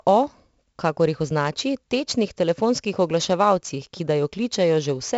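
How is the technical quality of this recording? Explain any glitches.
The quality is poor. One fault runs through the whole clip: 4-bit ADPCM compression. Each sample is stored as a coarse 4-bit step from a prediction. The leftover error becomes gritty hiss that rises and falls with the speech. Damage is heavy here. Sharp onsets smear and distort where the step size lags. Nothing is heard above about 7.7 kHz, so the speech sounds dull. That fits a 16 kHz sample rate, which would make the stream 64 kbps.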